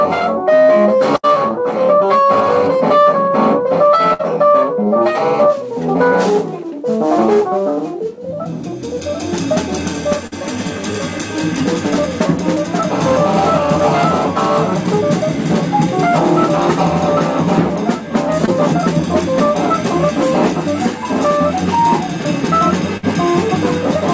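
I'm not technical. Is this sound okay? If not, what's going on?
No. Around 1.16, 4.13 and 22.97 seconds the sound briefly hangs and fades, then jumps ahead. Each is a burst of packet loss: a few hundredths of a second never arrived, so the call stretched out the last sound and skipped the missing stretch.

At 10.27 and 18.46 seconds there's a shorter smear or wobble. This is short concealed packet loss: a tiny piece went missing, the receiver patched it by continuing the previous sound, then blended back in. The call line itself also cuts off everything above 8 kHz.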